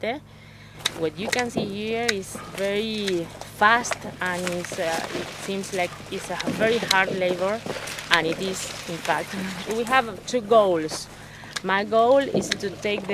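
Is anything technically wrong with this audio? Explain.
No, there is nothing technically wrong with this audio.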